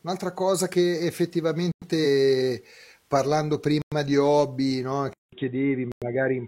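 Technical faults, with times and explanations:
1.72 s, 3.82 s and 5.92 s: gap between chunks. Each is a 100 ms hole, recurring every 2.0 s, including just before "di hobby no". The audio appears to arrive in 2 s chunks with silence inserted at each join. Nothing is lost, but the flow breaks.
2.01 s: compressed frames skipped. About two 46.4 ms frames never play, so roughly a tenth of a second of audio vanishes.
5.13 s to end: input switched to a poorer device. After "di hobby no" there is a 0.19 s silence, then the sound turns dull, with nothing above 3.8 kHz. A new noise floor sits about 55 dB below the signal, with little change in level. The likely cause is a switch to a narrower-band microphone or headset profile.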